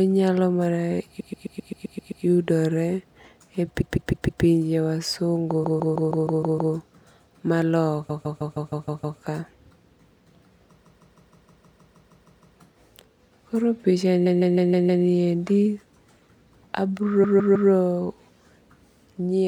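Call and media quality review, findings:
Repeated frames in speech, stuttering at 1.19–2.24, 3.80–4.43, 5.63–6.73, 8.09–9.18, 10.83–12.55, 14.25–15.04 and 17.23–17.70 s. A 131 ms block loops first, then 157 ms blocks. The encoder or transport resends compressed frames, adding about 7 s in total.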